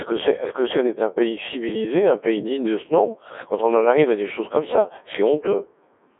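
Throughout, the speech has been squeezed through a Codec 2 vocoder, which discards the waveform and resynthesises it from sine waves driven by pitch, voicing and a coarse spectral envelope. It sounds heavily robotic and buzzy, with nothing above 3.7 kHz, fitting a 1.6 kbit/s mode.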